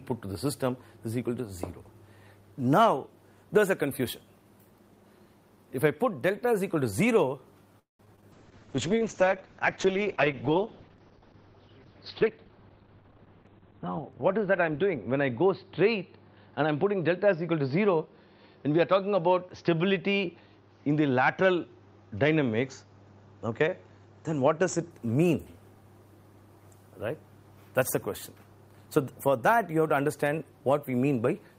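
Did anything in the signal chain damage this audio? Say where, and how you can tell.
Yes. From 7.79 to 8.01 s the sound trails into a fading buzz or hiss, then 150 ms of silence. This is likely a call audio freeze from delayed network packets.

Two short concealed packet losses follow, at 8.05 to 8.08 s and 8.16 to 8.19 s. Each loses 20 ms. The decoder papers over them, leaving brief smears.

At 8.21 to 8.24 s the audio skips ahead. About 70 ms is dropped, and the two sides are joined almost directly.

From 8.33 to 24.97 s a call bitrate drop takes the codec from 32 to 8 kbps. Bandwidth shrinks from 20 kHz to 4 kHz, so the sound turns muffled and rough.

From 8.53 to 9.31 s a jitter buffer slow-down plays at 91% speed. Repeated pitch periods add 80 ms, drawing sounds out at the same pitch.

From 12.22 to 13.19 s a jitter buffer speed-up runs at 121%. Around 200 ms of pitch periods are cut, so the passage sounds hurried.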